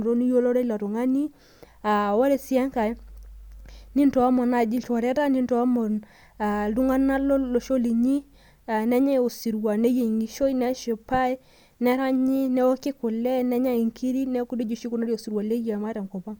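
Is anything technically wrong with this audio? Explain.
No, nothing technically wrong can be heard here.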